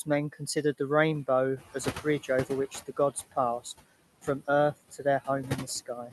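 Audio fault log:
throughout, noise suppressor artifacts: The room noise behind the speech never settles. It dips in the gaps and swells back up under each phrase. The suppressor judges, frame by frame, which frequency bands hold only steady noise and turns them down. Its gains keep switching band by band, so the leftover noise moves with the speech instead of staying constant.
1.56–2.77 s, noise suppressor catching up: Just after the background noise jumps by about 16 dB at roughly 1.5 s, the louder noise comes through with little reduction. It then sinks by about 14 dB over 1.21 s. The suppressor's noise estimate was set for the quieter room and needed that long to adapt to the higher level. Until it did, the new noise was treated partly as wanted sound and was only lightly reduced.
2.71–3.37 s, 4.22–4.48 s, 4.91–5.28 s, 5.86–6.12 s, speech cut by the noise suppressor: In each of these spans, parts of the speech sound swallowed, with soft sounds and word tails suddenly faint. 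The dips go down by about 10 dB at 4.22 s and about 15 to 16 dB in the others, and each lasts only a fraction of a second. The suppressor mistook these quiet speech components, sitting close to the raised noise level, for background and turned them down along with it.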